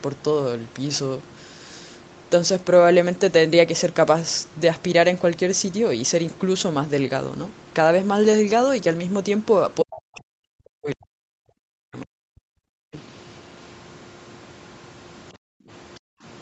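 From 9.81 to 12.13 s the speech repeatedly dips and breaks up, at worst by around 40 dB, for about two seconds in total. This is speech suppressed in double talk, likely because the echo canceller could not separate the talker from incoming loudspeaker sound. Unlike gating, it is the voice itself that collapses.

At 12.41 to 12.92 s, 15.37 to 15.69 s and 15.99 to 16.23 s, the room background drops by about 40 dB and then returns. This is background gated by the echo canceller clamping the microphone while the loudspeaker played. Here only the ambience drops out, not the speech.

Right after the first gate, from 12.92 to 13.01 s, a brief scrap of a second voice, roughly 20 dB below the speech, comes through. This is the other side's voice leaking through, likely as loudspeaker echo the canceller left behind. It adds sound rather than removing it.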